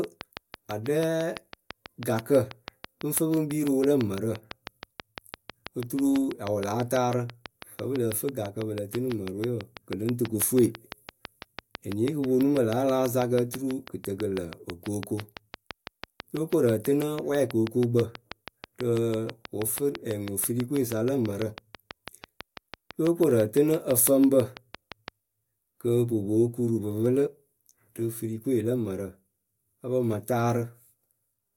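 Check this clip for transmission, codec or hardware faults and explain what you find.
There's one fault here, a train of clicks running from 0.04 s to about 25.09 s. The clicks come at a steady 6.07 per second, so around 150 of them, each much the same shape and peaking roughly 15 dB above the speech. That regular, identical pulse is likely interference from nearby equipment or an interface that's struggling. You hear it as an even ticking laid over the talking and sitting right there in the pauses too.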